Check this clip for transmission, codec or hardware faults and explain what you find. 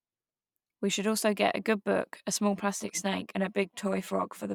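One fault is present. From 2.54 s to the end, channel delay (comb filtering): one channel lags by around 10 ms, so the mono sum sounds hollow, with evenly spaced horizontal notch bands on the spectrogram.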